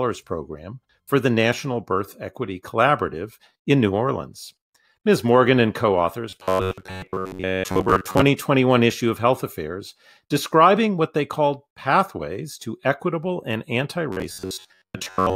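A speech clip with robotic sound from repeated short buffers in two stretches: 6.30 to 8.22 s, right after "and co authors", and 14.12 to 15.35 s, after "to equitable and anti". The voice becomes a rigid metallic buzz near 94 Hz, likely from a playback path repeating a roughly 10.7 ms buffer for most of that time. A waveform would show identical repeating cycles, and a spectrogram evenly spaced horizontal harmonics of 94 Hz.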